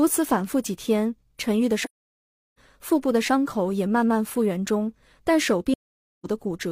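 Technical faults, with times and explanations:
1.84–2.59 s and 5.73–6.26 s, AAC frame loss with muting: the speech drops to silence for about 0.73 s and then 0.51 s, consistent with runs of roughly 17 and 12 lost frames. The decoder zeroes their spectrum, and the overlapping windows fade the sound out and back in, so each gap has soft edges.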